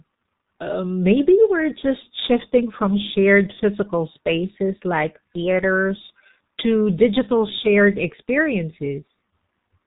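Right through the clip, the speech carries heavy G.723.1 codec damage, consistent with a roughly 6.3 kbit/s stream: nothing above 4 kHz, muffled, hoarse tone, and smeared consonants from its slow 30 ms frames.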